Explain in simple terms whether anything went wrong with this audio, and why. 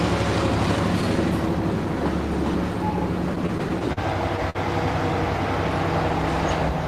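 Between 3.35 and 3.99 s there's a stretch of repeated stalls (stutter). The audio was arriving late, so the playback buffer ran dry six times, and each time the receiver just held the last bit of sound. That adds up to about 93 ms of filler (the longest hold is 41 ms), so it drags and hiccups even though nothing's actually missing.

Then at 4.50 s there's a short stall from a late packet. One chunk simply didn't show up on time, so the sound was stretched for about 49 ms until it arrived, and then playback picked up right where it left off, with nothing lost.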